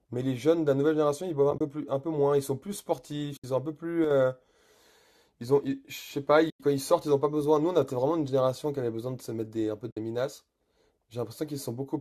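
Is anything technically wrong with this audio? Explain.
Yes. The speech has two kinds of fault.

AAC frame loss with muting occurs at 1.51–1.61 s, 3.37–3.44 s, 6.50–6.60 s and 9.91–9.97 s. Missing frames are decoded as silence, and the overlapping windows fade the sound out and back in, leaving soft-edged holes. The holes total 60, 70, 100 and 60 ms, fitting frames of about 10 ms. In the first, the gaps are scattered across 100 ms, with the longest run around 30 ms.

At 4.04–4.11 s the level drops abruptly by about 6 dB. This is likely one channel dropping out: with one stereo channel lost, the mono sum keeps only half of the shared content.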